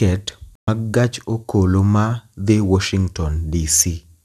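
At 0.55 s the speech cuts out abruptly in a digital broadcast dropout. The receiver stopped getting usable frames, either because the signal was lost or because frames failed their error check. It muted rather than play corrupt data. The silence lasts about 120 ms, which fits a handful of lost frames. Sound returns at 0.68 s, further along in the programme. Whatever was broadcast during that gap never arrives.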